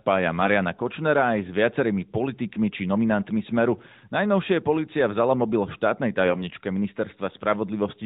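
At 6.26 s the speech goes rough for about 0.19 s, until 6.45 s. These are AMR bit errors. The clip is carried by the AMR narrowband mobile codec, so nothing above 4 kHz is present. In this stretch, bits in the less protected parts of several frames arrived flipped. The frame checks still passed, so the decoder used them anyway. Pulse positions and fine gain, pitch and spectral values came out wrong. Pitch and level hold roughly steady. The sound turns hoarse, scratchy and gargly, then clears.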